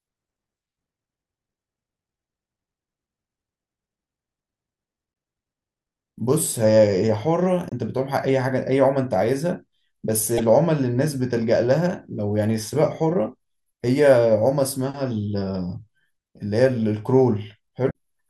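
Damaged data in a compressed stream strikes four times, at 5.10 to 5.15 s, 7.69 to 7.73 s, 10.38 to 10.40 s and 17.87 to 17.94 s. Corrupted frames throw the decoder out of sync, causing brief chirps, squawks, clicks or short holes that show as short broadband smears or jagged waveform spikes.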